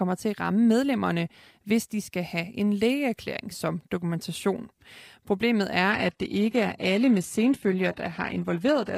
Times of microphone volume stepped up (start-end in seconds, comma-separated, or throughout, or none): none